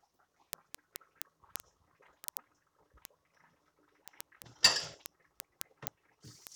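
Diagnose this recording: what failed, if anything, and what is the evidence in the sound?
A steady train of sharp ticks runs through the whole sound from 0.11 s to 6.55 s, recurring about every 40 ms, around 150 in all, some louder than others. These are word clock ticks, a failure at the digital interface into the converter: the receiving device runs on its own clock rather than locking to the sender's. Each time the two clocks drift a sample apart, a single sample is dropped or repeated, producing a click. A tick roughly every 40 ms suggests the clocks disagree by roughly 500 ppm.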